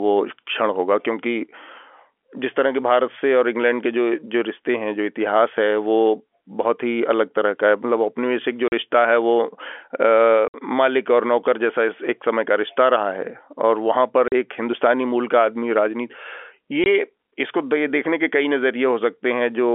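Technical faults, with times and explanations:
8.68 to 16.86 s, packet loss filled with silence: the speech cuts out abruptly at 8.68 s (40 ms), 10.48 s (60 ms), 14.28 s (40 ms) and 16.84 s (20 ms). Lost packets were replaced by silence, and the gap lengths fit 20 ms packets.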